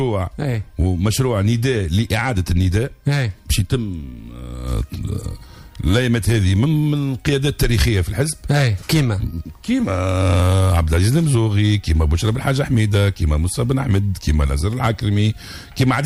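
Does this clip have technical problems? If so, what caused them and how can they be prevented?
No, nothing in the signal points to a technical fault, so there is nothing here that needs preventing.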